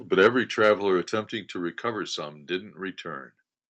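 From 0.22 to 0.27 s the loudest peaks turn harsh and crackly, likely microphone overload, the input driven about 3 dB past the converter's limit so a small share of the waveform's tops is sliced flat. At 0.27 s voice and background drop together by about 4 dB, likely the microphone volume stepped down by the call software in one move after that distorted peak. Between 0.64 and 0.70 s the crackle returns, milder, as likely microphone overload again, peaks pushing about 2 dB over the limit and losing their tops.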